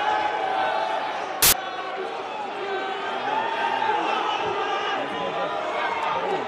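Samples built from the wrong bytes appear from 1.42 to 1.53 s, a burst about a tenth of a second long. The bytes within each sample were assembled incorrectly, either offset by one byte, taken in swapped order or read with the wrong alignment. The rapidly changing low-order bits therefore end up as the most significant part of each value. The result is loud, harsh broadband noise replacing the sound for that stretch.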